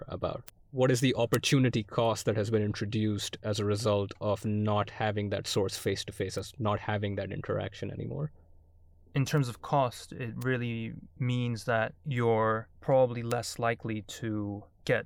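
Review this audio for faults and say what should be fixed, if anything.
Six bit error spikes, at 0.48, 1.34 (right before "cost that has been"), 6.39, 9.38, 10.42 and 13.32 s, peaking around -26 to -7 dBFS. A flipped bit jolts one to three samples by a power of two, giving a sharp broadband tick. Use error-checked memory and links.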